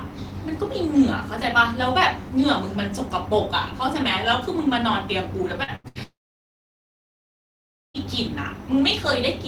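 At 5.63 to 5.71 s, a short concealed packet loss removes about 40 ms. The receiver extends the preceding sound, leaving a brief smear that shows as a smoothed patch on the spectrogram.

Two bursts of packet loss follow, at 5.76 to 5.87 s and 5.88 to 5.98 s, each dropping about 80 ms. Concealment holds the last sound and fades it, so it trails off before the audio resumes further on.

From 6.03 to 8.05 s comes a long network dropout, its likely cause a network outage. A fading tail of filled sound gives way to about 1.8 s of near-silence, a flat, empty stretch in the waveform, and the audio returns with roughly 1.9 s missing.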